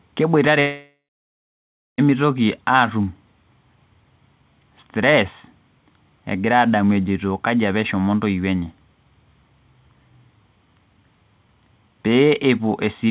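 At 0.6 s the speech breaks off. For about 1.4 s, until 2.0 s, the last sound is stretched into a fading buzz, and roughly the final second of that gap is near silence. The speech then resumes, but that stretch of audio never returns. This is likely a long network dropout: packets stopped arriving, and the receiver filled the hole with concealment. The whole clip stops at 4 kHz, which fits a G.711 mu-law call path at 64 kbps.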